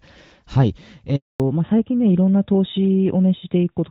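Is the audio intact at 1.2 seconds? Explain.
No. At 1.2 s the speech sits inside a handover gap running from 1.16 to 1.40 s, about 240 ms long. The call switched networks and no frames arrived, so the voice fades out within tens of milliseconds and stays silent until the new link resumes.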